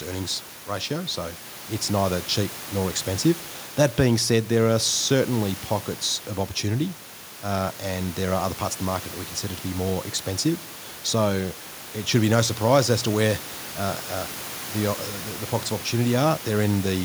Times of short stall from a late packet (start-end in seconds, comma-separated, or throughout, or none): none